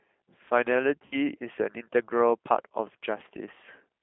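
The whole clip runs through a G.729 codec: speech is squeezed into roughly 200 Hz to 3.5 kHz and sounds rough and synthetic, consistent with 8 kbit/s G.729A. From 1.06 to 1.16 s there's VoIP packet loss concealed by the speech codec. The decoder stretches the last sound into a fading buzzy tone or coloured noise over what sounds like six lost 10 ms frames, then takes a moment to recover.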